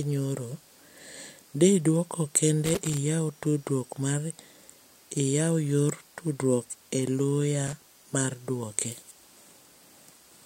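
Loose connector crackle appears at 2.65 to 2.98 s, between "di duoko" and "tudruok mar", and again at 7.66 to 7.82 s, after "yor tudruok e loya" and before "mar duoke". A worn or dirty contact is making and breaking as it shifts, so the speech is chopped into fragments. Both bursts sound like irregular scratchy crackling.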